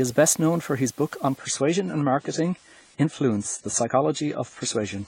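From the first moment to the end, the speech carries a constant, even hiss with no grinding or distortion: low bit depth with dither. The signal has been reduced to very few bits, which fits 8-bit audio, and random dither added before rounding turns the error into steady white noise, roughly 30 dB below the speech. On a spectrogram this shows as a uniform haze across all frequencies, filling the pauses too. In the waveform, the silences never reach a flat line.

At 1.37 s, right after "for his book on", the treble drops away abruptly with no gap and stays gone to the end. This is an adaptive stream at a lower bitrate: the player switched to a leaner version of the stream, which fits a move from about 96 to 24 kbit/s AAC. On a spectrogram nothing appears above 10 kHz from that point on, a sharp horizontal ceiling. The sibilants turn dull.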